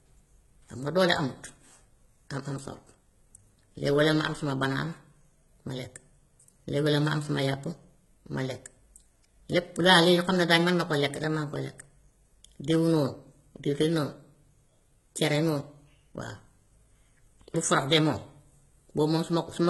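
From start to finish the treble sounds gritty and metallic, with s sounds turning lispy and nothing at all above about 11.8 kHz. This is likely heavy HE-AAC compression, with the upper band rebuilt by spectral band replication, which fits a bitrate around 16 kbps.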